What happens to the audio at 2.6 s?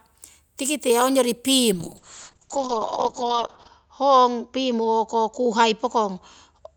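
At 2.6 s the audio is inside a call bitrate drop that starts at 1.74 s, just after "tikite ongyori", and lasts to the end of the clip. The encoder falls from 48 to 7 kbps, bandwidth narrows from 20 kHz to 8 kHz, and speech turns muffled and rough, bottoming out for about 1.9 s.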